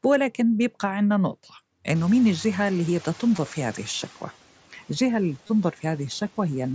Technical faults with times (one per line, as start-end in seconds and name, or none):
1.95-4.22 noise suppressor catching up
3.36 concealed Bluetooth headset packet loss
5.47-5.49 concealed Bluetooth headset packet loss